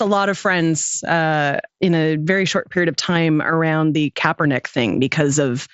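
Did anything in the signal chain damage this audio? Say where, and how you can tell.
No, nothing in the chain damaged this speech.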